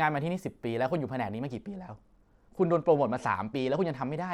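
From 1.52 s to the end the speech turns dull and gritty, treble vanishing: a Bluetooth SBC bit pool drop, consistent with falling from about 31 to 13.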